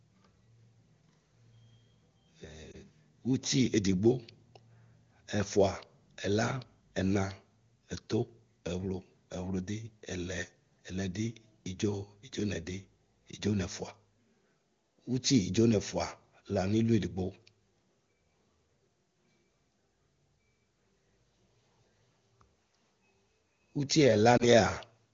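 Speech carried over the AMR wideband (HD Voice) codec shows lost AMR speech frames at 2.71 to 2.76 s and 24.38 to 24.48 s, each matching a single dropped 20 ms frame. The decoder concealed each one by repeating the last pitch and vocal tract settings at falling gain, producing a brief dip or warble. On a spectrogram this looks like a short smeared, repeated band. The waveform shows a small amplitude sag before the speech recovers. The 23.85 kbit/s AMR-WB rate leaves the speech clear.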